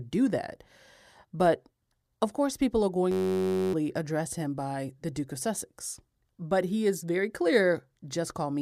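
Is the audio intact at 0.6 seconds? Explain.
Yes, the speech at 0.6 seconds is intact, with no dropout, click, distortion or other fault at that moment.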